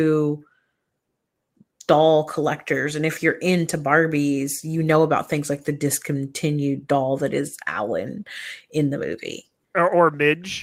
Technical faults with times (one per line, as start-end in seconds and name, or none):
none